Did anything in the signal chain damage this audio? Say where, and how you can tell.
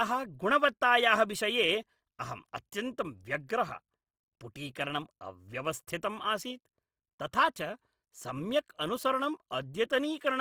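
Yes, at the codec stage, throughout: the speech is plainly grainy and rough, tones turned noisy, which fits Opus compression, likely CELT mode near 24 kbps. A spectrogram shows bands filled to about 20.2 kHz with few holes, harmonics smeared into speckled noise.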